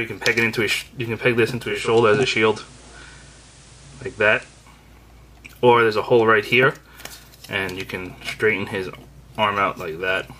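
At 1.55 s a 0.41 s cross-fade switches from the digital stream to FM, reversing at 4.87 s. This digital radio blending to analogue brings up hiss roughly 30 dB below the sound, while waveform level holds steady.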